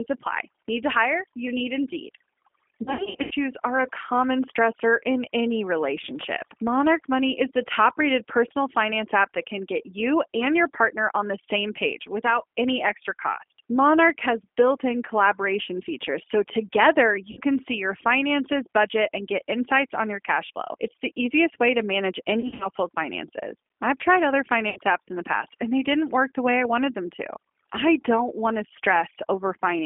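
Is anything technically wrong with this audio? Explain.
Yes, the speech has three technical faults.

Overdone noise removal runs throughout. A noise reducer set too aggressively switches off individual frequency bands near its noise estimate, taking quiet speech detail with them. The background drops and breaks up into twinkling specks.

G.729 codec coding also runs throughout, on a telephone line passing roughly 250 Hz to 3.4 kHz, with plainly audible damage. This 8 kbit/s codec rebuilds the voice from a vocal tract filter, a pitch predictor and a few pulses per frame, so it sounds rough, narrow and slightly synthetic.

VoIP packet loss concealed by the speech codec occurs at 2.83 to 3.33 s, 17.31 to 17.41 s, 22.40 to 22.67 s and 24.70 to 24.78 s. The decoder fills gaps by extending its last pitch and filter at falling gain. The first event scatters 280 ms of loss over about 480 ms, and the third scatters 140 ms over about 200 ms. 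The other two are 60 ms dropouts. Each gap sounds like a buzzy, smeared fade, with weak or distorted speech lingering briefly afterwards.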